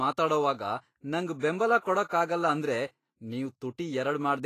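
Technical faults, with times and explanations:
Throughout: Vorbis compression. The speech sounds hissy and grainy, with roughened tones, blurred onsets and nothing above 14.2 kHz. This is likely low-quality Vorbis coding, which fits a bitrate near 31 kbps: the treble is quantised so coarsely that its fine detail turns to noise.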